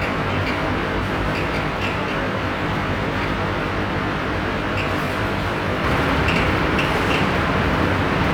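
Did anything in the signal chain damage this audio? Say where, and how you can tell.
Yes. Channel delay (comb filtering), 0 to 5.84 s, buffer stage: one channel lags roughly 20 ms before mono summing, leaving a rough, slightly doubled sound with evenly spaced notches from about 30 Hz.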